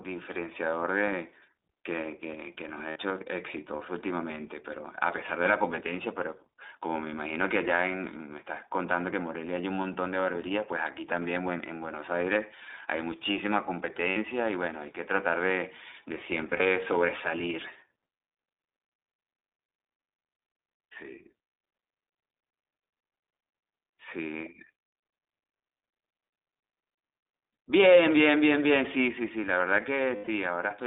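Speech sent through the iLBC codec is squeezed into a narrowband line of about 300 Hz to 3.7 kHz and coded in short independent frames, consistent with the 20 ms, 15.2 kbps mode. The result is muffled, plainly rough and somewhat synthetic throughout. Lost iLBC frames make the decoder fill each gap by repeating the last pitch cycle blended with noise. This gives brief held, buzzy vowel sounds at 2.90–2.97 s, 14.10–14.17 s and 30.16–30.29 s, the last being the longest at 120 ms. A scattered cluster from 16.50 to 16.66 s loses 80 ms in short runs of up to about 40 ms. The speech comes back cleanly right after each gap.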